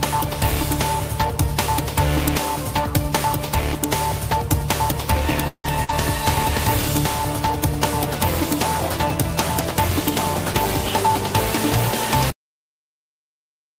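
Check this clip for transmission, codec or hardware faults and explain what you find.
Several transmission faults appear, clustered just after 5 s, and the recording ends abruptly.

Long network dropout, 5.47 to 5.67 s: the sound continues as a fading buzz or hiss, then about 60 ms of silence, and 160 ms is skipped, likely from stalled packet delivery.

Lost packet rebuilt from error correction, 5.64 to 5.66 s and 5.89 to 5.90 s: each 20 ms frame was decoded from a low-bitrate backup copy, so it sounds rougher and noisier rather than absent.

Burst of packet loss, 5.84 to 5.92 s: consecutive packets missed playback, so about 45 ms of concealment holds and fades the last sound, and 40 ms goes missing.

Cut-off end at 12.30 s: the final buffers were never written, so the audio stops mid-sound into digital silence with no decay.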